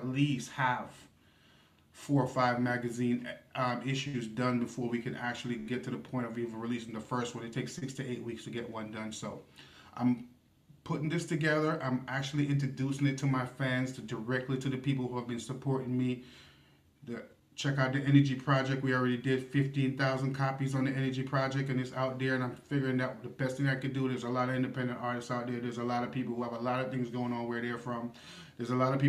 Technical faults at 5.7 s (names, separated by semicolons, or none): short stall from a late packet